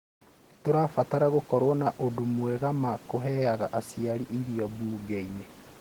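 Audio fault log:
Throughout: Opus compression. The speech carries plainly audible coding damage: a muffled, hoarse, grainy quality in the lower register, with rough noise-like texture filling the upper bands. This points to Opus working in its hybrid mode at a low rate, likely around 16 kbps. The band stays full, with content reaching about 20.1 kHz, and there are few spectral holes. So it sounds grainy rather than swirly and watery like MP3, and not dull like a narrowed low-pass.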